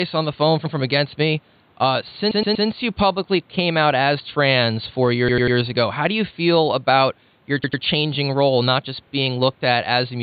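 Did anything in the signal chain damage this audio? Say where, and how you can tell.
Yes, there are repeated frames at the codec or storage stage. Just after "on the phone", at 0.65 s, a short chunk plays twice, and similar stutters follow at 2.31, 5.28, 7.63 (after "you feel about your", before "role not just") and 9.07 s. The repeated blocks are 48 to 120 ms long, which fits 24 ms compressed frames being written again. Each repeat adds its length to the clip, up to 360 ms at 2.31 s. The room noise sits about 37 dB under the speech.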